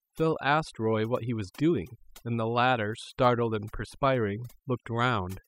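From start to finish the speech carries overdone noise removal: a noise reducer set far too hard has gated individual frequency bands near its noise estimate, taking quiet speech detail with them. The background drops and breaks up into twinkling specks. A spectrogram shows scattered isolated dots between holes, with patchy, eroded harmonics.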